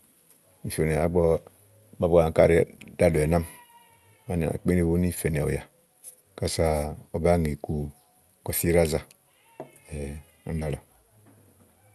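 At 10.59 to 10.65 s, short concealed packet loss: about 20 ms of the speech failed to reach the decoder in time. The receiver filled the gap by extending the preceding sound, then blended back in, adding a sliver of extra time. The result is a brief smeared wobble.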